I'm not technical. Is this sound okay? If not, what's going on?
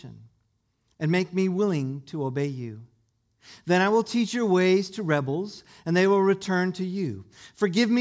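Yes, nothing wrong can be heard in this recording.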